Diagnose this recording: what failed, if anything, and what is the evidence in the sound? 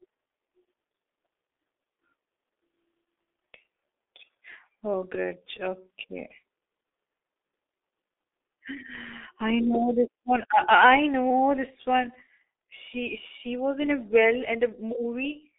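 The speech sounds muffled and hoarse for the whole clip, with smeared consonants and a rough, hoarse texture. The band is narrow, roughly 300 Hz to 3.6 kHz, with nothing at all above 3.7 kHz. This is the signature of the G.723.1 codec, heavily damaging the signal. It fits a low-rate telephony coder running near 6 kbit/s, which rebuilds the speech from a coarse vocal model updated only every 30 ms frame, so fast articulation blurs.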